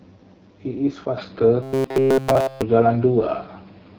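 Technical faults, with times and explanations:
Throughout: AMR wideband (HD Voice) codec at 8.85 kbit/s, one of the lowest rates in the AMR-WB range. At this rate the encoder has too few bits to model the vocal tract and its pulse excitation accurately below 6.4 kHz, and the band above that is only filled with shaped noise. The speech comes through plainly rough and raspy rather than with a clean, natural timbre.
1.18 to 3.98 s: input switched to a poorer device, likely a change to another microphone or a headset's call profile mid-recording. There is no gap at the switch. From here the device passes a narrower band, so the speech abruptly turns duller and more closed-in. The level shifts by roughly 5 dB, and a new, very faint noise floor, about 55 dB below the speech, appears with the new device's own coloration.
1.63 to 2.64 s: robotic sound from repeated short buffers, likely because fresh audio stopped arriving in time and the software kept replaying the last block while real audio was skipped. 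Essentially all of this stretch is repeated material. The looping imposes a fixed pitch of 133 Hz, which fits a buffer of about 7.5 ms. The speech becomes a rigid, metallic monotone buzz that only loosely tracks the original syllables for about a second.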